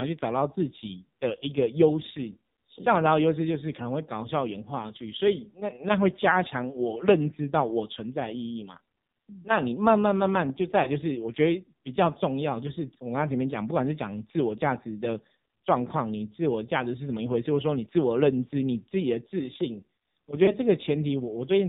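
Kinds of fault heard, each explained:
AMR narrowband mobile codec: Throughout the clip, the speech is band-limited with nothing above 4 kHz, and it sounds heavily buzzy and synthetic. Each 20 ms frame is rebuilt from a vocal-tract model and a few pulses, and the damage fits a low rate near 6 kbps.
Lost AMR speech frames: At 10.84 to 10.91 s and again at 20.46 to 20.55 s, the speech briefly dips and warbles. Each event sounds like a single dropped frame of about 20 ms, which the decoder filled by repeating the last good pitch and vocal-tract settings at reduced gain.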